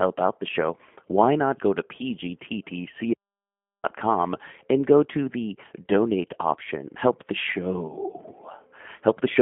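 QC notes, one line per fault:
Throughout: G.729 codec. The speech has passed through a low-rate VoIP codec, a sound that fits G.729A at 8 kbit/s. Each short frame is rebuilt from a vocal tract filter, a pitch predictor and a few coded pulses rather than the original waveform. Nothing survives above 3.7 kHz, and the line band runs roughly 150 Hz to 3.5 kHz. The speech comes out thin, muffled and plainly rough and synthetic.
3.14 to 3.83 s: audio dropout to silence. The input was most likely lost, through a disconnected device, a failed link or a stray mute, while the recorder kept writing silence. The speech cuts off mid-flow and returns about 0.7 s later. The gap is silent with no room tone underneath. Whatever was spoken in that stretch is gone and cannot be recovered from the clip.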